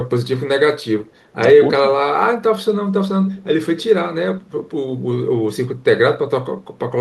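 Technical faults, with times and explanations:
3.26–3.42 s, echo leak: The far end was most likely playing the call through a loudspeaker, and its echo canceller let part of what its microphone picked up slip back into the line. The result is a brief, faint repeat of the speech trailing about 259 ms behind the original, sitting around 30 dB below it, so it registers as a ghostly scrap rather than a clear second voice, lasting only about 0.16 s before it drops away.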